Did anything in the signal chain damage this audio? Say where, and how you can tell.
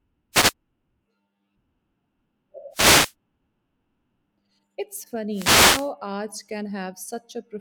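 Yes, the damage comes from the wireless microphone's radio link, upstream of the converter. There are three wireless microphone noise hits: 0.32 to 0.53 s, 2.71 to 3.14 s, and 5.30 to 5.92 s. Each is a short swish of static over the speech, from about 0.2 s to 0.6 s long. What's going on is multipath fading: reflections cancel the FM carrier, the receiver's noise floor comes up, and the static rises until the signal recovers.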